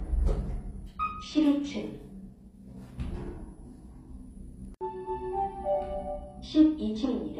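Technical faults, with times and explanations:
Throughout: transcoding between lossy codecs. The sound carries two layers of compression damage at once, smeared, swirly highs over a thin, gritty texture, with nothing above 14.9 kHz, likely from an MP3 encode at 64 kbit/s being re-encoded to HE-AAC at 24 kbit/s, each stage adding its own artefacts.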